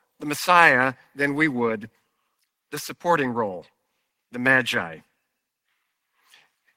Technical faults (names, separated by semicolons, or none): none